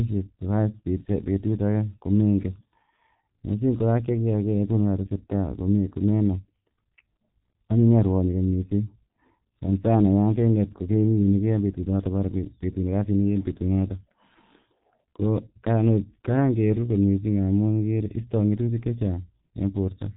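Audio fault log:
throughout, G.723.1 codec: heavy damage with a 4 kHz ceiling and slow 30 ms framing, which fits a rate near 6 kbit/s. The speech is muffled and hoarse, and consonants smear, unlike a simple low-pass filter that stays clean.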